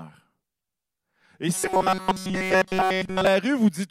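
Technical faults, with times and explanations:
1.54 to 3.27 s, robotic sound from repeated short buffers: essentially the whole stretch becomes a rigid, metallic buzz fixed at 188 Hz that only loosely tracks the speech. The likely cause is audio arriving too seldom, so playback loops a segment of about 5.3 ms while fresh audio is skipped. On a spectrogram this shows as flat, evenly spaced harmonics at multiples of 188 Hz; the waveform repeats an identical short cycle.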